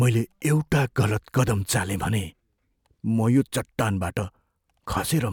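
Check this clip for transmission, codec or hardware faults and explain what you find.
The speech signal holds steady throughout, with no audible dropouts, glitches or distortion from the transmission chain, encoding or playback hardware.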